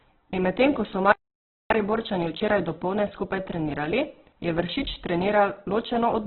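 Opus compression runs through the whole clip and is the likely cause of what is heard: the speech has nothing above 4.1 kHz and sounds heavily damaged. The encoder appears to be in its music mode at a very low rate, which fits a bitrate near 8 kbps. Short of bits, it fills bands by folding lower ones or with noise, so voiced sounds come out rough, grainy and noisy. The narrowband limit leaves the speech muffled throughout.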